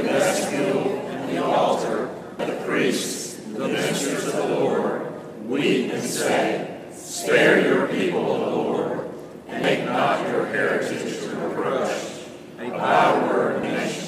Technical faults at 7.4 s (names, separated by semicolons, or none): none